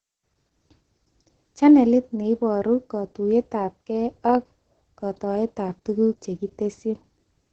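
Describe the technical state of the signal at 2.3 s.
At 2.3 s, Opus voice compression, present throughout, leaves nothing above 8.6 kHz; coarse SILK excitation makes the speech hoarse and robotic, unlike a plain low-pass, consistent with roughly 10 kbps.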